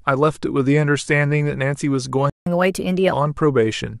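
At 2.30 s the speech stops dead and stays silent until 2.46 s, a gap of about 165 ms. This is a playback stall, most likely the player's buffer running dry or its thread being blocked. Unlike a dropout, where a stretch of sound is lost and the signal jumps ahead, the speech here goes silent for a noticeable time and then carries on.

From 2.46 s to 3.12 s the speech runs 1.25 times faster and sits about four semitones higher. This is catch-up at higher speed: the player resamples its backlog to win back the time lost in the stall, so tempo and pitch rise together. It differs from slow pitch drift because it starts abruptly right after the silence, holds a steady raised rate, and then returns to normal speed and pitch.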